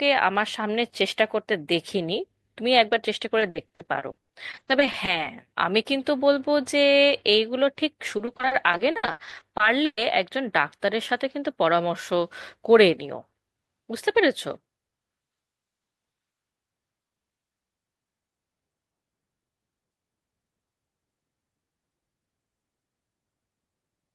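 Repeated packet loss (robotic sound) hits at 3.39–5.09 s and 8.17–9.99 s. Gaps of up to 80 and 120 ms are patched by repeating earlier sound, about 30% of each stretch, giving choppy speech with pieces missing. On a spectrogram this shows as smeared, repeated blocks.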